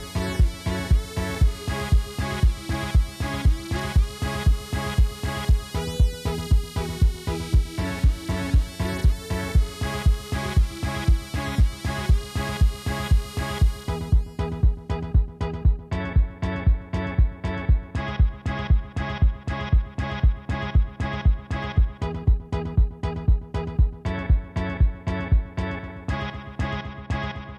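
No technical faults are audible anywhere in this audio.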